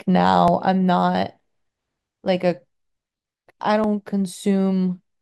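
At 0.48 s the speech jumps forward, skipping about 30 ms, then does the same more briefly, around 10 ms each, at 2.28 s and 3.84 s. That's likely a dropped buffer (overrun): samples weren't collected in time, so the edges butt together with no gap.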